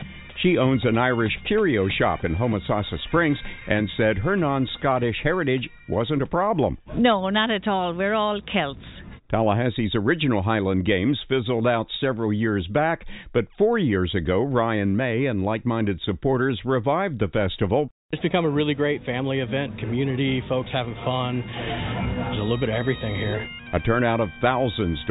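No technical faults can be heard anywhere in the audio.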